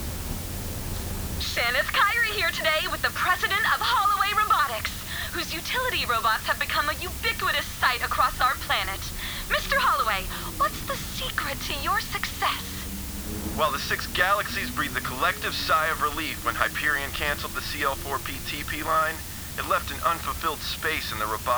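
From start to finish the audio carries low bit depth with dither: roughly 6 bits, with noise added before rounding, so the error becomes a steady, even hiss only about 10 dB below the signal. Unlike undithered truncation, it never turns grainy or gated.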